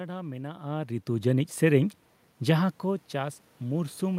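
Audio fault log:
0.44–4.18 s, automatic gain rising: the automatic gain control judged the input too quiet and kept turning its gain up steadily from 0.44 s to the end, so the level climbs gradually rather than jumping. Because the boost comes after the microphone, the room noise swells right along with the speech, which sets it apart from the talker's own shifts in distance near half a second and two and a half seconds, where only the voice level changes.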